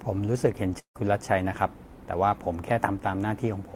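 It's a short speech clip with one problem: a long network dropout from about 0.79 to 0.97 s. Right at 0.79 s the sound smears into a fading buzzy tail as the receiver keeps stretching the last bit it got, then it goes quiet for roughly 0.1 s. When the audio comes back, around 160 ms of speech is simply gone. That pattern points to a likely stall in packet delivery rather than anything at the source.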